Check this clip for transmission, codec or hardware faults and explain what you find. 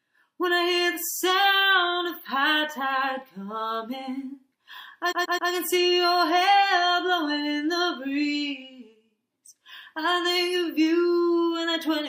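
One transmission fault stands out: repeated frames from 5.11 to 5.5 s. A 131 ms block, consistent with a run of about five compressed frames, replays three extra times, adding 0.39 s. It stutters identically rather than dropping to silence.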